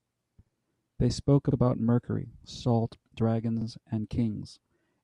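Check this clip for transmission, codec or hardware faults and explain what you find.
The clip has one fault, overlapping chunks, at five joins: 0.46–0.51, 1.51–1.56, 2.56–2.61, 3.61–3.66 and 4.66–4.71 s. The speech was handled in 1-second chunks, each starting 50 ms before the previous one ended, so that 50 ms slice plays twice at every join. It sounds like a brief stutter or click about once a second. Unlike a dropout, nothing is missing: the audio repeats rather than vanishing.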